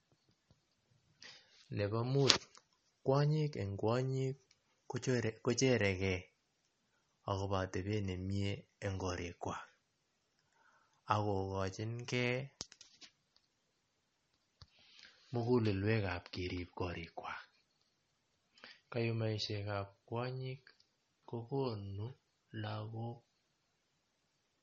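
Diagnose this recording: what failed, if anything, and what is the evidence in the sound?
Watery, swirly speech throughout: codec stage, likely MP3 compression dropping weak lines, fitting about 33 kbps.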